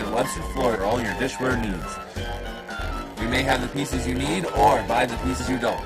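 A block size mismatch (padded) runs through the whole clip. One stage writes shorter blocks than the next reads, and zeros fill the remainder. Each block gets a brief gap. The result is a 100 Hz buzz. The audio plays at 0.919 times normal speed, with pitch largely unchanged.

From 0.75 to 0.77 s, damaged data in a compressed stream causes a short glitch. The decoder misreads corrupted frames and loses sync. It then hunts for the next valid header. A second blip follows at 5.39 s.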